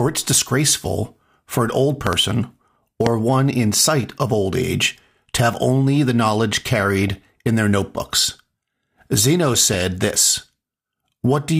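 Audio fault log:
0.30–0.46 s, 3.95–4.09 s (between "one in" and "of old age to"), 7.03–7.40 s (between "have only the knowledge" and "in their notebooks"), 9.48–9.82 s: DAB burbling. Weak-signal bit errors slip past error correction and corrupt sub-band samples and scale factors, so narrow frequency bands leap in level frame by frame. The speech gets short blips of noise in single sub-bands rather than going silent as in a full dropout.
2.07–2.15 s (just after "for an old") and 3.06–3.09 s: loud pop. First a double pop, then a single one, each peaking about 15 dB above the speech, which continues underneath unbroken. The likely cause is a voltage spike from a plug, switch or static discharge added to the signal. Unlike a dropout click, no audio is lost.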